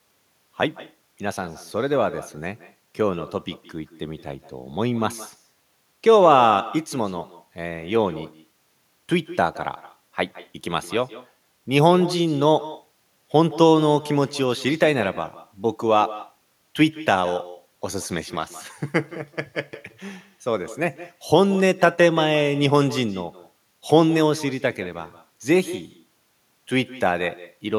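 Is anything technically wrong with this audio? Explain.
Yes. Throughout the speech, every phrase is shadowed about 150 ms later by a thinner copy roughly 17 dB quieter. This is echo with no canceller: the far end's loudspeaker leaks into its microphone, and nothing removes that return before it comes back.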